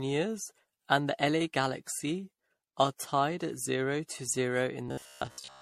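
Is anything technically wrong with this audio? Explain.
Yes, there are two faults in this speech clip.

Generation loss runs through the whole clip. The audio sounds swirly, smeared and hollow, and attacks are blurred. The likely cause is repeated lossy encoding, around ten passes, with a character that fits MP3 at about 64 kbit/s. Each pass quantises again on a shifted frame grid. The noise and spectral holes build up with every pass.

Robotic sound from repeated short buffers appears from 4.89 s to 5.62 s, at the end of the clip. The speech turns into a rigid, metallic buzz at 66.8 Hz. It still roughly tracks the speech. The likely cause is audio arriving too rarely, with the player looping its last fragment, about 15 ms long, to fill the gaps. Most of the real audio there, roughly two thirds or more, is skipped.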